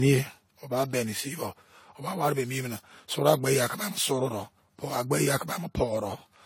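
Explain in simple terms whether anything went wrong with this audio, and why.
Something went wrong for the whole clip, from the first moment to the last: it shows generation loss. The speech was most likely compressed, unpacked and compressed again around seven times with the same lossy AAC format. Each round throws away slightly different detail, and the damage piles up. The voice sounds swirly, smeared and hollow, the starts of syllables lose their crispness, and nothing above about 17.7 kHz remains.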